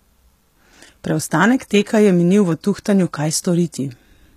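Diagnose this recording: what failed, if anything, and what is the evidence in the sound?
Codec: s sounds are gritty and lispy throughout, likely HE-AAC compression rebuilding treble from copied lower bands; the spectrogram shows repeated upper bands stopping at 14.9 kHz.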